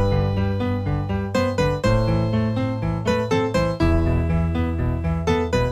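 No technical faults can be heard anywhere in the audio.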